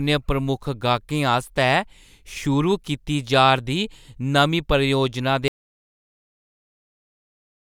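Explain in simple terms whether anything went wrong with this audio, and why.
At 5.48 s the speech stops dead and the rest of the clip is complete silence. This is an audio dropout to silence, likely from the input being lost. Unlike a natural pause, even the faint background room sound vanishes.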